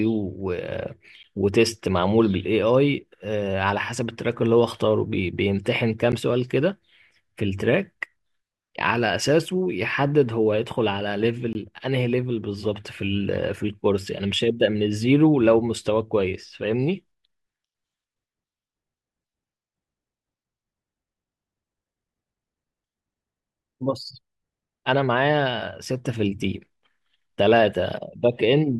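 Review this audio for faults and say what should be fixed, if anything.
Blocks of digital silence at 1.23 s and 6.12 s (10 ms each) and 11.53–11.55 s (20 ms): the sound cuts out and back abruptly with no fade. Make sure the output buffer is always filled in time and that no calculation produces invalid sample values.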